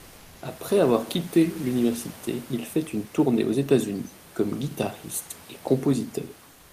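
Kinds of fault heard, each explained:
Comfort noise in place of the background: the sender likely stopped transmitting during silence, so the first 0.41 s of background becomes steady, featureless synthetic noise about 1 dB quieter.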